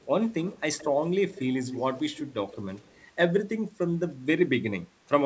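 Delayed repeats of the speech surface at 0.45–0.61, 0.78–0.86, 1.33–1.41, 1.65–2.31, 2.52–2.56 and 2.81–3.04 s, lagging by roughly 170–180 ms. This is likely an echo leak, loudspeaker sound that slipped past the far end's echo canceller. It comes as a distinct copy rather than a smooth reverberant tail, loudest around 1.65–2.31 s at about 10 dB below the speech and elsewhere far quieter.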